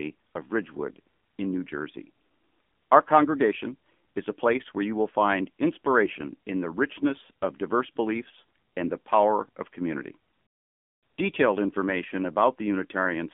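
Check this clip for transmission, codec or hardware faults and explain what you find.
One fault runs through the whole recording: AMR narrowband mobile codec damage. It is plainly audible from start to finish. The speech sits in a narrow band from about 200 Hz to 3.5 kHz. Nothing above that passes, so sibilants lose their crispness. AMR-NB samples at 8 kHz. It rebuilds the voice from a vocal-tract model driven by a few pulses per 5 ms subframe. Here the voice sounds buzzy and synthetic, which fits a low mode around 7.4 kbps.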